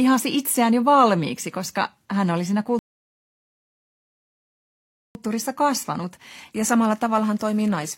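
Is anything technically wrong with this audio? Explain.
Yes. At 2.79 s, right after "koska hän oli siinä", the speech drops to silence and stays there until 5.15 s. This is a rebuffering stall: playback exhausted its downloaded audio and paused until more data arrived. When the stream continues, it picks up at exactly the point where it stopped, so no speech is skipped. The result is a dead gap of about 2.36 s inserted into the middle of the speech.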